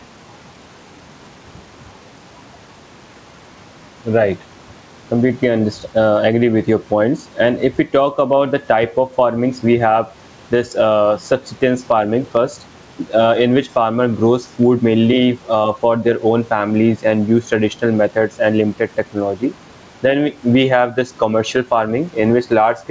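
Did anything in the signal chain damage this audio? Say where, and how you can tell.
Yes. The damage is at the capture and gain stage, before call processing: input gain set far too high, with a fast limiter or compressor likely clamping it on every loud sound. Gain pumping runs throughout. The background, normally about 39 dB under the speech, rides on a gain swing of around 10 dB. Loud and soft passages sit squashed together. The band stopping at 8 kHz fits a G.722 call path at 64 kbps.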